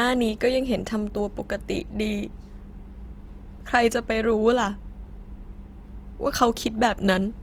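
Throughout the speech, Opus compression is plainly audible as a grainy, rough texture. It likely comes from a low-rate CELT encode, around 24 kbps, filling starved bands with folded or noise energy. A spectrogram shows content reaching about 20.2 kHz, with few holes but noisy, smeared upper bands.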